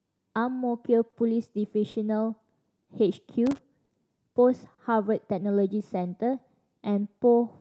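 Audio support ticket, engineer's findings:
Clock drift between sender and receiver, throughout: sender clock runs roughly 3% slow, jitter buffer keeps draining, receiver repeatedly pads audio, giving uneven small timing hiccups.

Short stall from a late packet at 1.1, 1.91, 2.84, 3.85 and 4.74 s: buffer ran empty, last sound held 30 ms (40 ms at 4.74 s) until the packet arrived. Nothing lost, just a brief held tone or dip.

Loose connector crackle, 3.46 to 3.58 s: irregular scratchy burst, a worn or dirty contact making and breaking, chopping the signal.

Repeated timing corrections, 5.97 to 7.30 s: receiver stretching the stream to keep pace with the slow sender, playback near 96% speed, around 50 ms added in total. Heard, if at all, as a slightly dragging, unsteady tempo.

Call path is Opus at 32 kbps with an 8 kHz audio bandwidth. Its band limit and usual coding noise are in the clip too.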